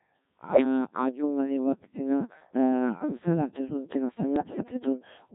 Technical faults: Codec 2 vocoder; bit errors on digital voice radio

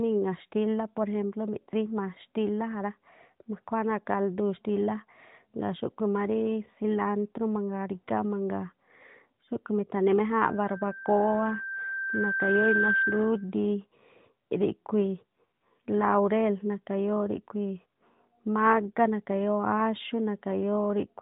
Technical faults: loudspeaker feedback squeal

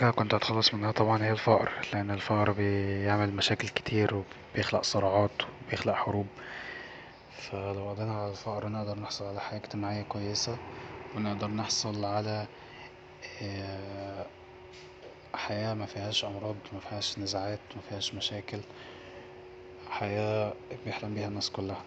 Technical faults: none

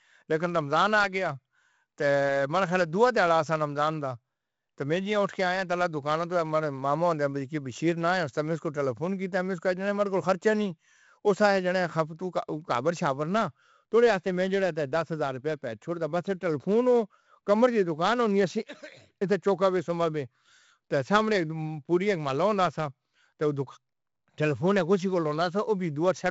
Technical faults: 4-bit ADPCM compression

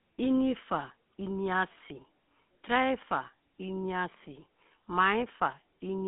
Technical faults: GSM full-rate codec

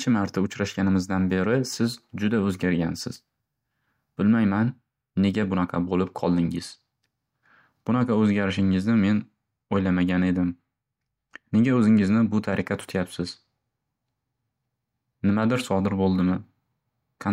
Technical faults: none

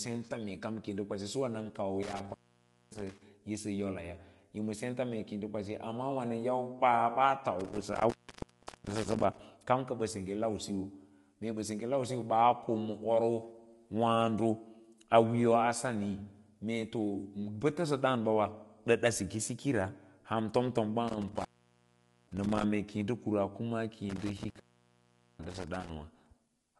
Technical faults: low-delay AAC compression; intermittent contact

